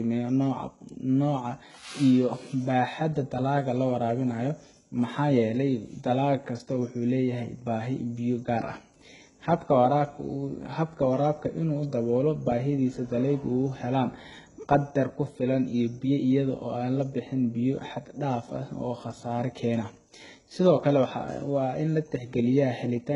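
The speech has gritty, lispy s sounds and a synthetic-sounding treble that stops near 11.1 kHz, likely heavy HE-AAC compression at a very low bitrate, around 12 kbps.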